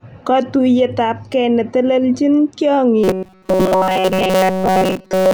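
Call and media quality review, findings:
Robotic sound from repeated short buffers, 3.04 s to the end at 5.34 s. Speech goes to a rigid, metallic buzz at 188 Hz that still loosely tracks the words. Likely playout underrun looping a ~5.3 ms chunk, with most real audio skipped.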